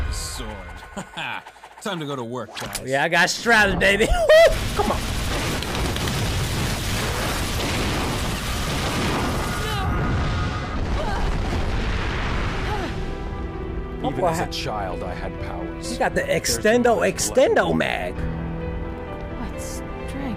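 Nothing in this one trips the ear; there's no glitch, dropout or distortion anywhere to point to.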